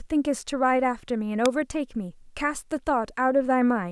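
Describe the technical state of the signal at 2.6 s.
At 2.6 s the speech signal is intact, with no audible fault at that moment.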